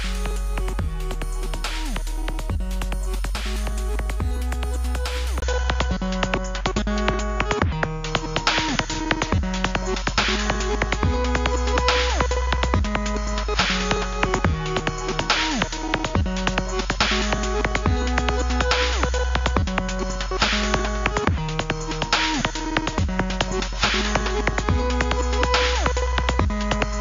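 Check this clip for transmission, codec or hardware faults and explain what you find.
One fault is present. At 5.40 s the sound drops out for about 20 ms. From then to the end, nothing is heard above 7.1 kHz, so it turns duller and boxier. A new background noise sits roughly 35 dB under the signal, though loudness barely changes. This likely reflects the input switched to a poorer device, whose narrower band and own noise replace the original microphone's.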